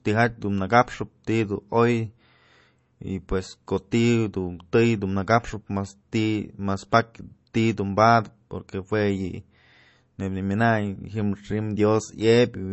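From start to finish, the speech has nothing above about 7.9 kHz. The top end is simply missing, so sibilants sound dull and the sound lacks air. The artefacts of heavy MP3 compression run through the whole clip. This is likely low-bitrate audio saved at a high bitrate. The cut-off and artefacts fit a first pass near 32 kbit/s. Re-encoding at a much higher rate, around 320 kbit/s, kept that damage but restored nothing.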